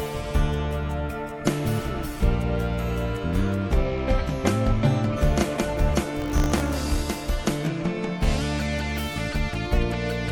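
From 6.2 to 7.02 s there is buffer tearing: the writing program and the playback hardware have slipped, so each period splices in a small slice of audio from about 40 ms earlier, with hard joins. This produces a steady robotic rattle at 50 Hz.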